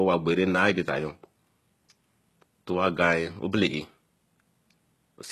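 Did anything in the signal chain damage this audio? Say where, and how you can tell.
Yes, at the codec stage. Throughout the speech, treble is present up to a hard ceiling near 12.3 kHz, yet s sounds come out gritty and metallic. That points to heavy, likely HE-AAC compression, fitting a very low bitrate near 16 kbps, with band replication copying lower bands upward rather than simple low-pass filtering.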